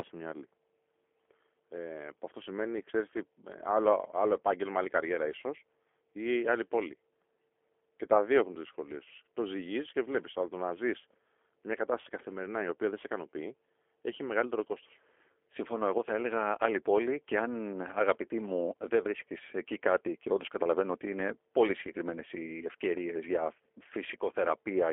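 Speech heard through a narrow telephone band, roughly 300 Hz to 3.4 kHz, carrying the plainly audible roughness of the G.729 codec. Its slightly buzzy, synthetic texture comes from the decoder rebuilding the voice from a vocal tract filter, a pitch predictor and a few pulses per frame. That sparse rebuilding fits an 8 kbit/s coder. Simple band-limiting alone would sound dull but clean, not grainy like this. From about 12.02 to 12.05 s, just before "καθημερινά η οποία δεν", a gap of about 20 ms shows VoIP packet loss concealed by the speech codec. The decoder keeps extending the last pitch and filter at falling gain, so the sound smears into a brief buzzy tone or coloured noise that fades. It then recovers weakly for tens of milliseconds as later frames rebuild on the patched state. A plain dropout would instead be silence or a click.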